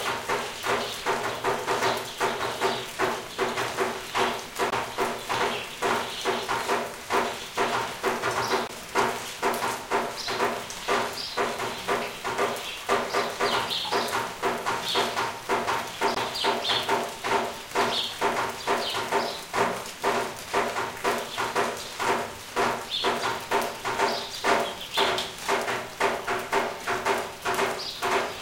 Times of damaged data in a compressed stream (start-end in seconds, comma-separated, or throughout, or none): 4.69-4.73, 8.66-8.70, 16.13-16.18